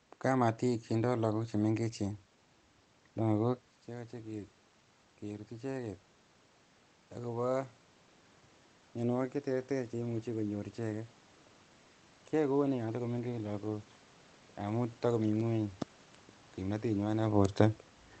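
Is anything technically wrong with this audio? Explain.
Yes. Automatic gain rising runs from 3.87 to 6.09 s. Just after the speech drops by about 12 dB, when the talker pulls back at around three and a half seconds, the gain control judges the input too quiet and slowly adds about 4 dB of gain. A talker moving changes only the voice, but here the room noise swells along with it over those two seconds, so the device is adjusting, not the talker.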